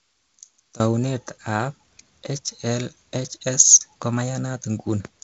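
Speech, carried over G.722 wideband telephone coding with nothing above about 7.8 kHz. The likely cause of the problem is one channel inverted in polarity, so the mono sum cancels from 0.0 to 0.8 s. The sound drops by about 17 dB and turns faint.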